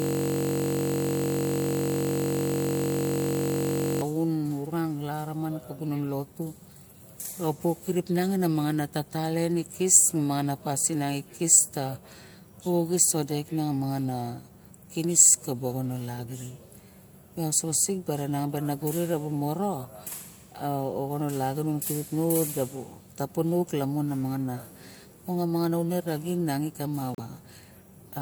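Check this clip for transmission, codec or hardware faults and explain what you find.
Two faults here: a hang loop at the very start and a brief glitch near the end.

From 0.0 to 4.02 s, already under way when the clip begins, there's a system hang loop. The machine or driver stalled while the sound hardware kept replaying the same 21.33 ms slice, which fits a 1024-sample buffer. That repeats at 46.9 Hz, so you get a steady buzz instead of speech.

Between 27.13 and 27.20 s the audio skips ahead with a short glitch, likely a broken MP3 bit reservoir. Frames were lost, and the following 24 ms frames reached back for borrowed bits and found bytes of another frame instead, so roughly the next two or three frames decode garbled.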